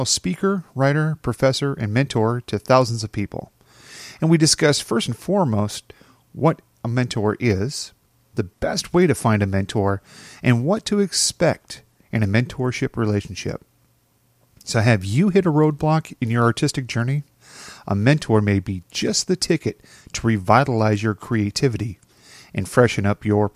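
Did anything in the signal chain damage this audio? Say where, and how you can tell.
No, no signal-chain damage heard.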